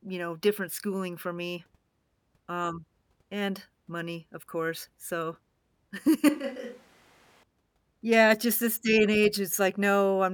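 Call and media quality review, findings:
Speech abruptly turns roomy and hollow, thinner in bass, 6.29–7.43 s. Level drops about 10 dB; room noise rises to roughly 25 dB below speech. Likely switch to a distant microphone: close mic lost, farther pickup substituted, then restored.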